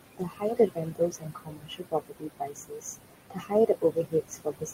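Noise suppressor artifacts run throughout the clip. The suppressor pulls down the bands it judges to be steady noise by about 21 dB, frame by frame. The room noise, only about 8 dB under the speech, dips between phrases and swells beneath them.

Speech cut by the noise suppressor occurs from 0.17 to 2.84 s and again from 3.3 s to the end. Treating quieter parts of the speech as noise, the suppressor drops them by up to about 21 dB, roughly a second and a half in the first stretch, leaving consonants and endings swallowed.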